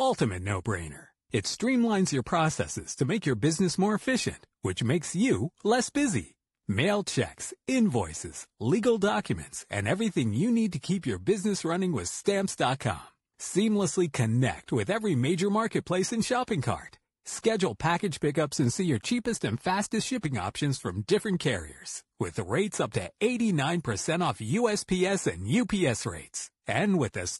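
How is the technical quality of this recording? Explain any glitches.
The speech has plainly audible codec damage throughout. It likely passed through low-delay AAC compression (AAC-ELD), at a rate that fits about 32 kbps, leaving the voice rough and grainy.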